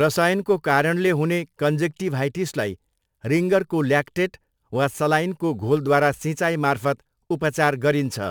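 Crude rate conversion runs through the whole clip: the speech was resampled by simply repeating the nearest sample, with no filtering, which fits a 44.1 kHz to 48 kHz conversion. The resulting inharmonic fizz, roughly 30 dB below the speech, tracks louder and brighter syllables.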